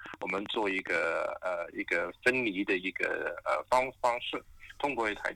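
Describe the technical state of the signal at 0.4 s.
At 0.4 s the signal sits inside a train of clicks running from 0.06 to 1.05 s. Short, near-identical pulses land at a steady 12.2 per second, around fifteen in all, peaking roughly 10 dB above the underlying sound. Such evenly spaced impulses most likely come from electrical interference or a struggling interface injecting a spike on a fixed cycle. They are heard as a rapid, regular ticking laid over the audio.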